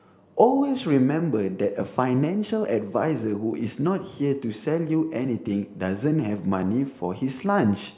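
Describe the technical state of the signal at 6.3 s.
At 6.3 s the signal is intact, with no audible fault at that moment.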